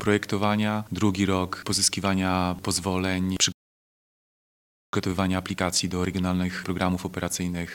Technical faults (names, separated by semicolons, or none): playback stall; time-compressed catch-up